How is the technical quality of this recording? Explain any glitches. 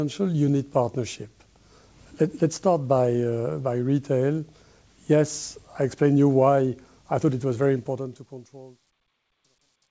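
The recording has one clear glitch, in the closing fade-out. Truncation distortion on the fade runs from 7.73 s to the end: the fade stage drops low-order bits without dither, which fits a 12-bit path. The tail turns gritty, worst from about 8.8 s. The call-path band limit, with nothing above 8 kHz, points to G.722 at 64 kbps.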